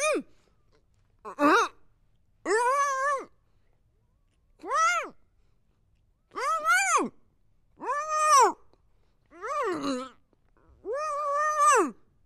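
Between 7.04 and 8.56 s the audio abruptly slows by 5.38% and drops about 96 cents, nearly a semitone, then snaps back to the original pitch and tempo. This is a drift correction step, likely from clock-matching software changing the playback rate in one jump to rebalance its buffer. On a spectrogram every harmonic line steps down together for that span and then jumps back up, while the waveform looks slightly stretched in time.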